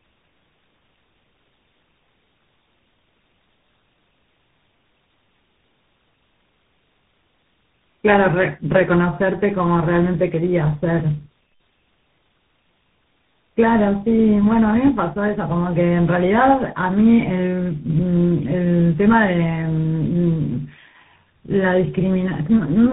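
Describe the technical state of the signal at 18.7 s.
At 18.7 s the speech carries tandem speech coding, present for the whole clip. It sounds like three speech codecs in a row, each recoding the previous one's damaged output. The sound is rough, warbly and muffled, with nothing above 3.8 kHz.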